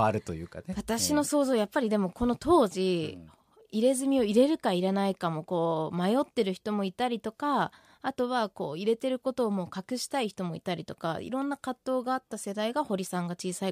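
No technical faults can be heard anywhere in this speech recording. Nothing breaks into the sound at any point, so there are no times or values to report.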